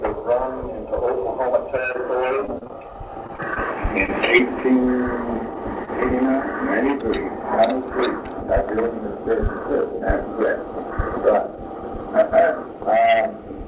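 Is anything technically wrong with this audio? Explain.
Yes. The audio has four jitter-buffer and packet-loss faults, all carried over a narrowband call path with nothing above 4 kHz, which fits G.711 A-law at 64 kbps.

Repeated packet loss (robotic sound), 1.92 to 4.66 s: About a dozen short dropouts occur across this span, each 35 ms at most. The receiver patches each one by extending the preceding sound. Around 230 ms is filled this way and about 140 ms of real content is lost, so the passage sounds choppy with pieces missing.

Jitter buffer slow-down, 4.67 to 4.94 s: Right after the losses, the receiver rebuilds its reserve by repeating pitch periods, adding about 39 ms. Playback drops to 88% speed while the pitch stays the same, so the sound is audibly drawn out over this quarter second.

Jitter buffer speed-up, 5.76 to 7.00 s: The receiver trims excess buffered audio by cutting short pitch-period pieces, removing around 50 ms in total. 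The sound runs at 103% speed with unchanged pitch.

Short stall from a late packet, 5.85 to 5.89 s: Inside the speed-up, one packet arrives late and the buffer runs dry. The last sound is stretched by 24 ms until the packet lands, and playback then resumes without losing anything. It is heard as a brief hold.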